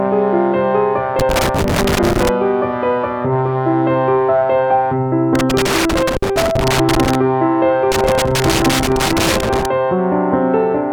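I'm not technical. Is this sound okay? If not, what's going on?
No, there's a problem. You can hear loose connector crackle in three bursts: from about 1.19 to 2.29 s, again from 5.35 to 7.15 s, and from 7.92 to 9.66 s. It's that irregular scratchy, crackling sound you'd get from a plug that isn't seated well or a worn, dirty contact. As it shifts, the connection keeps cutting in and out very fast, chopping up the sound.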